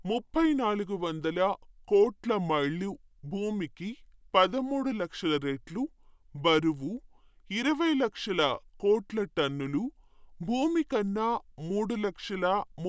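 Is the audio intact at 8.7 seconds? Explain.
No. At 8.7 seconds, as across the whole clip, the speech suffers from a wrong sample rate. Everything runs at about 0.73 times normal speed and sits about 5.5 semitones low, which fits audio recorded at 22 kHz being played back at 16 kHz with no conversion. Voices sound deep, slow and drawn out. Unlike a pitch shift or a time-stretch, which alter one property alone, here tempo and pitch drop together by the same ratio.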